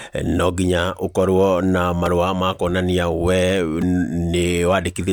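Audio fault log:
2.06 s and 3.82 s, repeated buffer: brief buzzy clicks, the second longer. Fresh audio arrived late, so the last block, apparently about 5 ms long, replayed once and then twice with hard joins, losing roughly 5 and 10 ms of speech.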